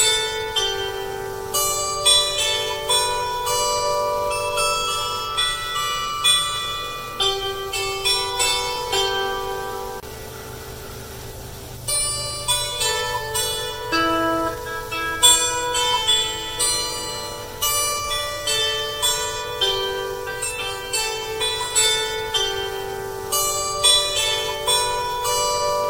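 From 0.24 s right through to 25.84 s there's a tick roughly every 1.02 s, around thirty in all. These are periodic USB or driver dropouts: something stalls the bus or driver on a fixed cycle, and a sliver of audio well under a millisecond is lost to silence, so each gap clicks.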